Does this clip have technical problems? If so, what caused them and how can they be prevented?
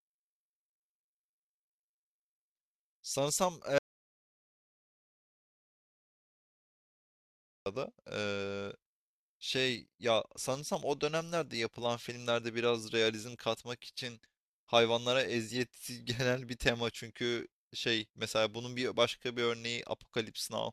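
Yes. An audio dropout to silence runs from 3.78 s to 7.66 s: the speech stops abruptly and about 3.9 s passes in silence, with no room tone, before speech resumes mid-flow. The likely cause is a lost input signal, such as a loose cable, a dropped wireless link or an accidental mute, while recording carried on writing silence. Secure connections, monitor input meters during capture, and run a backup recorder.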